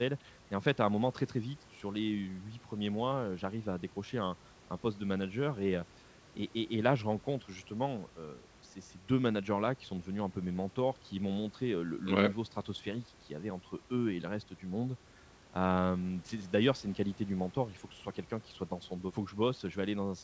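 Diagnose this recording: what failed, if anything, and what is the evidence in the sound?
Nothing in this speech recording points to a failure at any stage. The call path band-limits the sound with nothing above 8 kHz, consistent with G.722 at 64 kbps, and a low room noise sits about 30 dB below the speech.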